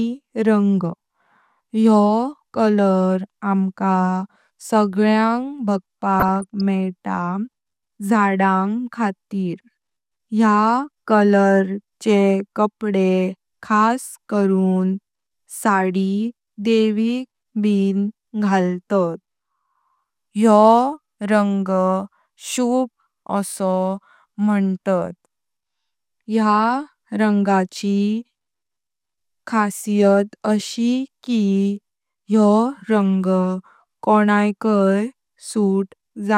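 From 6.20 to 6.61 s the speech breaks into DAB burbling. Weak reception let bit errors slip past the error correction into the MP2 audio stream, which fits around twenty corrupted frames at a bit error rate of a few tenths of a percent. Damaged samples put short blips of noise into individual sub-bands, and damaged scale factors throw sub-bands up or down in level for up to a frame, so the passage burbles with these blips and level jumps laid over the speech.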